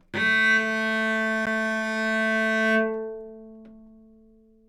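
A CD skip occurs at 1.46 s. The laser pickup was knocked or met a flaw in the disc and lost its track, landing on a different turn of the spiral. The player mutes the output for a very short moment, around 10 ms, while it recovers, then resumes from the new position. A tick or short gap marks the mute, and the sound carries on with an abrupt discontinuity.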